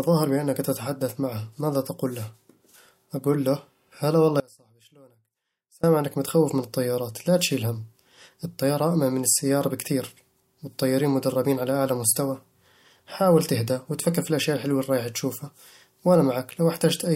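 A speech recording with one audio dropout to a faint residue. After "أقول له هلا والله" the sound cuts out abruptly at 4.40 s. For about 1.43 s only a faint trace remains, roughly 30 dB below normal. It returns at 5.84 s with "إنك متخوف من الطيارات". The likely cause is a brief loss of the signal feed while the downstream path stayed live.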